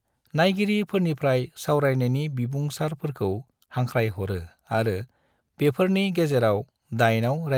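Throughout the speech there is clock drift between sender and receiver: the sending clock runs roughly 2% slow relative to the receiving end, so audio arrives a little behind the rate at which it is played out. The jitter buffer keeps edging toward empty, and the receiver has to pad the stream to keep playing. Over the whole clip the sound has a faintly dragging, unsteady pace.

Those fixes show up as repeated timing corrections from 0.16 s to 7.46 s. Because the sender is slow, every correction goes the same way: a short piece is repeated rather than cut. Together they add about 150 ms, so playback runs at about 98% of the original pace. Each repeat is small and unevenly spaced, and is heard, if at all, as a slight hiccup or stumble. On a spectrogram these appear as thin vertical seams where a sliver of harmonics is duplicated. On the waveform a brief stretch of cycles recurs back to back at each correction.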